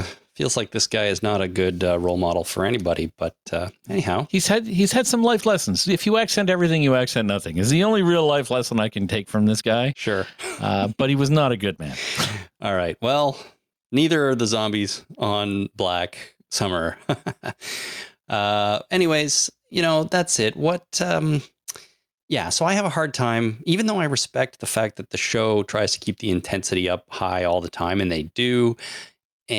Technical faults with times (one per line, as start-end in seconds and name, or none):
0.00-29.58 gain pumping